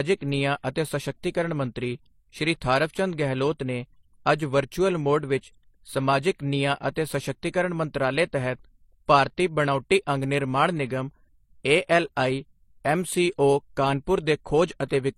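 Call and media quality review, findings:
Stacked codec artefacts throughout the speech, sharp spectrogram ceiling at 16.1 kHz. Likely transcoding between lossy codecs, an MP3-style stage re-encoded by HE-AAC, both near 30–40 kbit/s.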